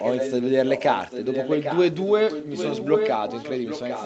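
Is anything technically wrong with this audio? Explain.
Yes, there is an echo leak. From 0.0 to 3.11 s and again from 3.29 s onward, a copy of the speech returns about 0.8 s late. In the first stretch it is only slightly quieter than the original; in the second it is clearly quieter. The likely cause is a far-end loudspeaker whose echo canceller let some microphone pickup through. On a spectrogram, each speech pattern reappears shifted right by 0.8 s, sitting within the same band that ends at 8 kHz.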